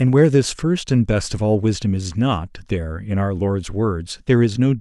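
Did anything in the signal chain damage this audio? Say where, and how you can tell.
No, no fault is audible.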